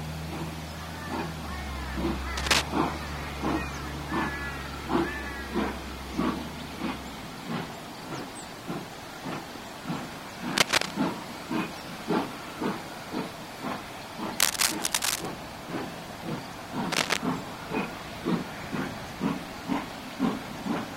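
Cable scratch noise breaks into the audio at 2.37 to 2.63 s, 10.51 to 10.94 s, 14.39 to 15.27 s and 16.92 to 17.17 s as brief, dense, ragged scratching, loudest in the first burst, which rises well above the sound. It is likely a worn cable or connector being moved, with its contact resistance fluttering.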